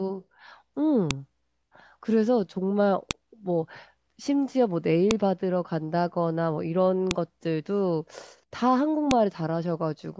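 At 1.11, 3.11, 5.11, 7.11 and 9.11 s the speech is interrupted by a sharp, loud click, each one a file header played as audio. The two-second spacing fits separate WAV pieces of 2.0 s being joined or streamed with each header left in place. Those header bytes are read as sample values, producing a brief snap at every piece boundary that has nothing to do with the speech around it.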